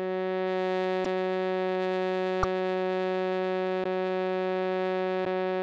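The likely cause is a broken MP3 bit reservoir: frames went missing from the stream, so each frame after a gap reached back for its borrowed data and decoded bytes from another frame instead. The music jumps ahead with a brief glitch, about one frame long, consistent with a 26 ms MP3 frame, at 1.03–1.06 s, 2.42–2.45 s, 3.83–3.86 s and 5.24–5.27 s, recurring roughly every 1.4 seconds.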